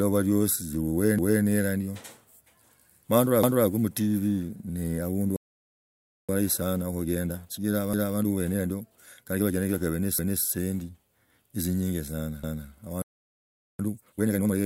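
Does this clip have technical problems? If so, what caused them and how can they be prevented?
Yes. Overlapping chunks: a quarter-second stutter at 1.19 s (just before "ila ndyo"), 3.44, 7.94, 10.19 and 12.44 s, where each 2 s chunk starts 250 ms early and replays that piece. Aligning chunk boundaries exactly, or trimming the overlap before joining, prevents it.

Playback stall: the speech cuts to silence for about 0.67 s at 5.36 s and about 0.77 s at 13.02 s, likely because the player ran out of buffered data. A larger playback buffer prevents it.

Time-compressed catch-up: after each stall the speech sounds hurried at normal pitch, at 1.15× from 6.29 to 9.54 s and 2× from 13.79 to 14.55 s, as the player cuts the backlog. Preventing the stalls removes the need for it.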